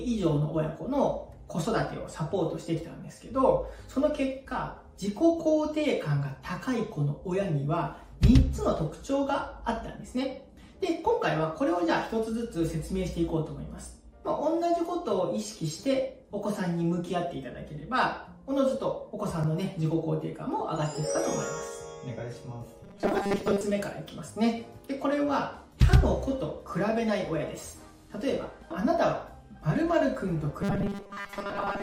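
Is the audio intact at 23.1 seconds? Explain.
No. Robotic sound from repeated short buffers runs from 22.84 to 23.63 s. It is likely caused by a short buffer repeating, forcing a rigid, metallic 200 Hz buzz.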